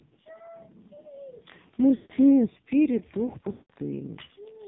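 Throughout, the speech sounds buzzy and synthetic with heavy codec damage, and nothing above 4 kHz survives. This is the AMR narrowband mobile codec. Its pitch-and-vocal-tract model, driven by only a few pulses in each 5 ms, gives a coarse result that points to a low rate of around 5.9 kbps.

From 1.96 to 2.12 s and again from 3.52 to 3.71 s, the sound smears, stretches and fades toward silence, and then returns weak and rough. These are lost AMR speech frames. The decoder repeated the last good settings with falling gain for about 140 ms and 180 ms, which fits runs of roughly seven and nine 20 ms frames.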